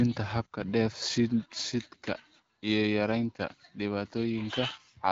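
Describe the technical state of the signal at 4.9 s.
At 4.9 s the signal is intact, with the speech carried cleanly through what sounds like the AMR wideband (HD Voice) codec at a rate consistent with 12.65 kbit/s.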